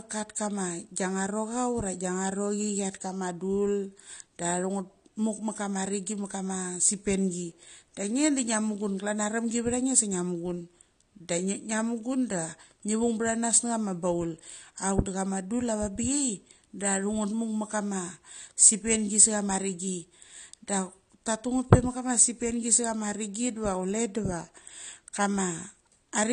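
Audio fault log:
Throughout, AAC compression: the speech sounds dull and band-limited, with plainly audible codec damage, likely from AAC-LC encoding at a bitrate around 32 kbps. The encoder spent its few bits on the lower spectrum and discarded everything above 9.7 kHz, so consonant detail loses its air. On a spectrogram this shows as a hard, flat ceiling at 9.7 kHz across the entire clip, with empty space above it. The waveform itself looks unremarkable.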